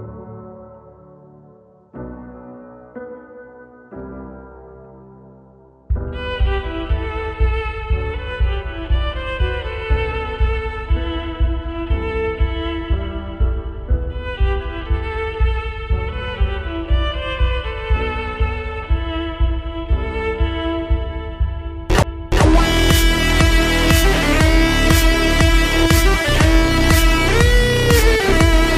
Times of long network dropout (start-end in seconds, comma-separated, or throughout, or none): none